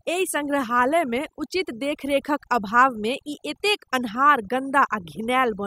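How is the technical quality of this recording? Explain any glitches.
The recording is marred by overdone noise removal throughout: aggressive per-band suppression leaves near-silent gaps with twinkling specks, unlike a gate's whole-signal muting.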